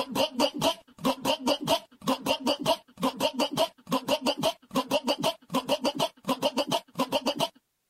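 No technical faults can be heard anywhere in the audio, and the signal stays continuous and intact throughout.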